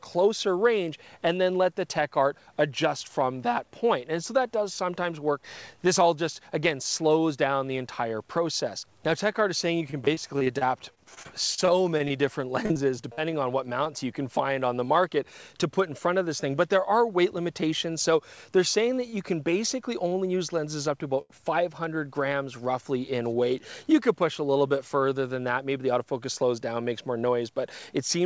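Audio carried over a call path whose G.722 coding leaves nothing above 8 kHz shows repeated packet loss (robotic sound) from 9.78 to 13.88 s. Nearly twenty short holes, the longest 39 ms, are patched by repeating the last sound, which gives choppy texture. On a spectrogram these appear as smeared, frozen harmonic slices, and the waveform shows copied cycles. Jitter buffer speed-up runs from 15.24 to 16.09 s at 104% speed and from 25.57 to 25.93 s at 109%, with around 40 ms trimmed each time. Pitch stays put while events bunch together, so the spectral lines keep their frequency but crowd closer in time. Short stalls from late packets occur at 19.10–19.14 s (26 ms held), 20.08–20.13 s (28 ms) and 21.21–21.32 s (83 ms). Each one stretches a sound until the packet arrives, visible as a briefly frozen, flat-textured column with a slight level dip.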